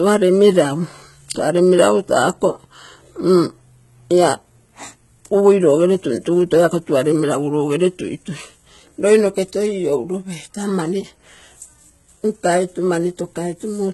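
HE-AAC compression, throughout: the treble stops completely at 11.8 kHz, and what remains above the lower band sounds synthetic, with gritty, lispy s sounds and heavy damage. This likely comes from spectral band replication rebuilding the speech's upper range from copied lower bands, consistent with a very low bitrate near 16 kbps.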